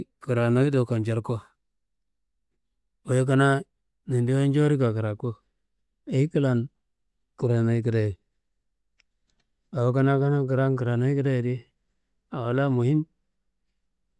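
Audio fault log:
Nothing in the speech recording stood out as a fault on listening.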